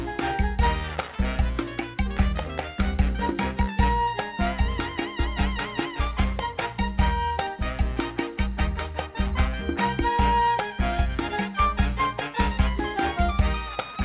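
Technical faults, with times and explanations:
No technical faults can be heard in the clip. It has come over a call path whose sound stops at 4 kHz, which fits narrowband G.711 mu-law coding at 64 kbps.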